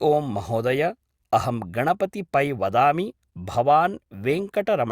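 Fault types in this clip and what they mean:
No technical faults are audible in this recording.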